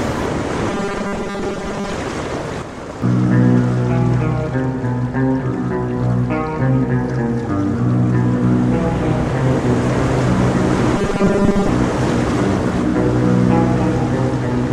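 From 0.70 to 1.94 s and again from 10.96 to 11.69 s, the sound turns into a rigid, metallic buzz at 200 Hz that only loosely tracks the original. This is robotic sound from repeated short buffers, likely caused by audio arriving too seldom, so a stretch of about 5 ms is looped in place of most of the real material. Unlike dropouts, the gaps are filled by the 200 Hz buzz rather than silence.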